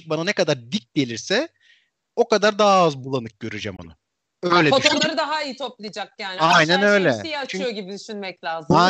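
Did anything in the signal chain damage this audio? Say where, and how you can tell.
Yes, at the codec stage: corrupt frames were decoded and played. Three bursts stand out, at 3.76–3.86 s, 4.85–5.04 s and 6.50–6.55 s, the later two reaching near full scale and the first around -25 dBFS. Flipped bits made the decoder apply wrong gains and misread codes, putting energy at the wrong frequencies for several frames. On a spectrogram they appear as isolated bright blocks unrelated to the speech harmonics; the waveform shows abrupt noisy spikes.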